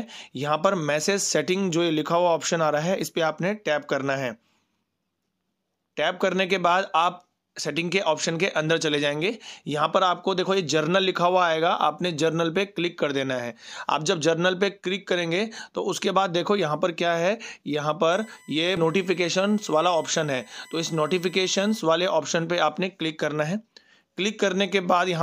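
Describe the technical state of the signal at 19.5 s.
At 19.5 s you're in the middle of a USB whine running from about 18.12 to 21.81 s: a steady, fixed-pitch tone at 1 kHz with its loudest component at 2 kHz, sitting roughly 30 dB under the sound, from the bus's 1 ms frame current leaking into power or ground.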